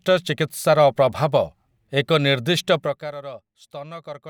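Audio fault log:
2.74–3.14 s, zipper noise: the speech level drops by around 20 dB in unsmoothed 1 dB jumps, roughly fifty per second, so each jump clicks and together they buzz. A spectrogram shows faint, evenly spaced vertical streaks. The waveform envelope descends like a staircase.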